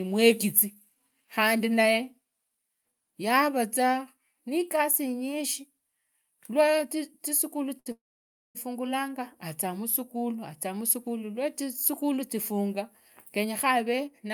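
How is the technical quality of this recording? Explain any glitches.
The recording has three timing glitches on the receiving side, all in the second half: two interruptions close together and a hurried ending.

At 7.79 to 7.88 s there is a short stall from a late packet. One packet arrived after it was due, the jitter buffer emptied, and the receiver stretched the last sound by about 63 ms until the data caught up. The speech then resumes from exactly where it paused, so nothing is lost. What sets it apart from the freeze that follows is its brevity: a held sound with a slight buzz or dip rather than a drop into silence.

Right after, from 7.92 to 8.57 s, comes a call audio freeze. The sound continues briefly as a fading buzz or hiss, then goes silent for about 570 ms before the speech picks up again without any missing material, having been pushed about 631 ms later. The likely cause is packets held up in transit, draining the jitter buffer for much longer than the earlier stall. 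That length, and the true silence in the middle, distinguish it from a momentary hold.

From 13.38 s to the end, a jitter buffer speed-up makes the speech run about 8% fast at unchanged pitch, removing roughly 70 ms in total. The buffer was holding more delay than it aims for, so the receiver trimmed short pitch-period slices repeatedly to catch up. Unlike a tape-style speed change, the voice does not rise in pitch. It simply sounds hurried.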